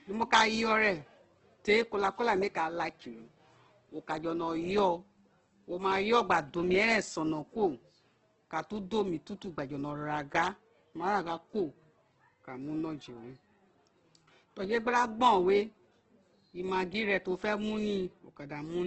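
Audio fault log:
throughout: Opus compression. The speech is band-limited with nothing above 8.2 kHz, and it carries a heavy grainy, rough texture. Harmonics dissolve into noise rather than swirling, because the encoder holds each band's energy and, short of bits, fills the detail by folding lower bands or inserting noise. That character points to the music (CELT) mode at a wideband setting, and the damage level fits a very low rate around 12 kbps, likely from a low-bitrate Opus encode.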